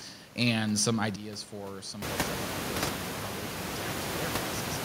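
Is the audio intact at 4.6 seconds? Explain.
No. At 4.6 s the audio is still inside a sudden gain jump. It starts at 1.16 s, right after "and some", and lasts to the end. The level falls by about 12 dB at once, with the background noise dropping along with it. This is likely a gain setting or bit shift applied without a ramp.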